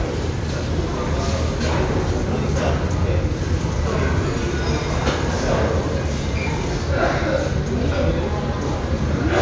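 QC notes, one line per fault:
No faults heard in this clip.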